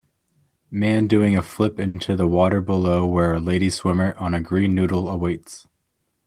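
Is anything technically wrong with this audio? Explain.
Yes. At 1.87 to 1.97 s, after "doing a flip", there is a short stall from a late packet. The jitter buffer ran dry, so the last sound was stretched by 70 ms. Nothing is lost. The sound just hangs briefly before "the water below where" resumes.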